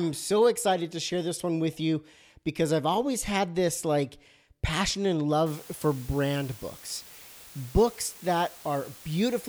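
From 5.46 s, after "this like passion and", low bit depth with dither adds an even, undistorted hiss about 20 dB below the speech, which fits 7-bit quantisation.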